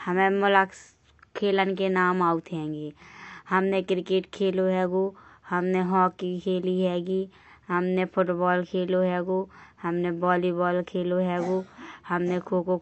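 From start to finish the speech sounds dull, with nothing above 8 kHz, and sibilants and held vowels smear into a warbling fizz. The likely cause is AAC compression at a rate near 32 kbps; a simple low-pass filter would not add that watery texture.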